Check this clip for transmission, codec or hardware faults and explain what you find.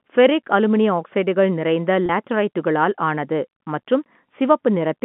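One transmission fault stands out in the speech, a single case of packet loss with pitch repetition.

From 2.06 to 2.09 s the sound briefly holds and turns slightly buzzy, as if one vocal cycle were stuck and looped. About 30 ms of audio went missing in transit, a gap that fits three 10 ms packets. The receiver covered it by replaying the last pitch period over and over. The gap is too short to fade to silence, so only the frozen, buzzy tone shows. The narrow 150 Hz to 3.4 kHz band of the G.711 telephone coding can be heard across the clip.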